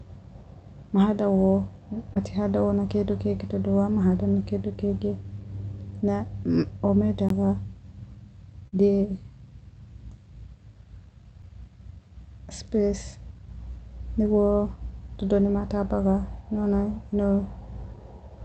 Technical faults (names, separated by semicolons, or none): short concealed packet loss; block of digital silence